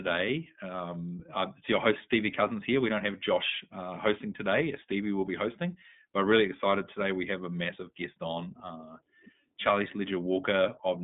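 From start to finish the speech carries the iLBC codec sound: nothing below about 150 Hz or above 3.6 kHz, and a slightly rough, synthetic edge that's plainly audible. Each short frame is coded on its own, which fits the 20 ms, 15.2 kbps mode.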